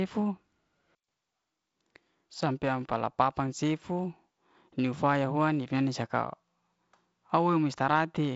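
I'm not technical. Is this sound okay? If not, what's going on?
Yes, nothing in this speech recording stood out as a problem when listening to it.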